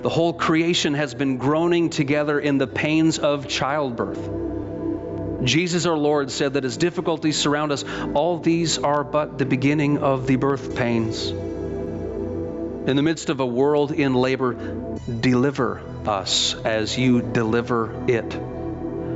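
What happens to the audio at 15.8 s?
At 15.8 s the audio shows gain pumping, present through the whole clip. The gain swings by around 15 dB, likely from a fast limiter working against gain set far too high. On a waveform the quiet stretches rise toward the peaks, flattening the envelope.

Clock drift between sender and receiver also runs through the entire clip, with the sender's clock about 3% slower than the receiver's. The jitter buffer keeps draining, so the receiver must keep filling time. This is heard as a faintly unsteady tempo rather than a single event.

Those fills are the repeated timing corrections, running from 0.02 s to 18.96 s and covering 15.8 s. Short pieces are repeated, leaving playback at about 98% speed and adding around 0.4 s overall. On a spectrogram they appear as small, unevenly spaced duplicated slices, heard as slight hiccups.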